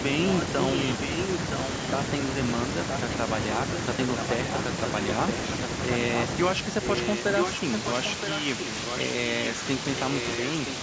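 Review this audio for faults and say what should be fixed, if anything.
Echo leak, 4.19 to 6.24 s and 6.82 to 8.98 s: a second copy of the speech trails the original by about 0.97 s, only slightly quieter than it. This is likely a loudspeaker on the far end whose echo canceller failed to remove its own playback before sending it back. To prevent it, the far end should use a headset or a properly converging echo canceller.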